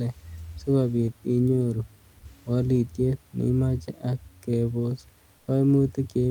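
Comfort noise in place of the background at 5.37 to 5.47 s: for 100 ms the real room noise drops out and a steady, featureless hiss, about 3 dB quieter, fills the pause, likely because Opus discontinuous transmission stopped sending audio while no speech was detected.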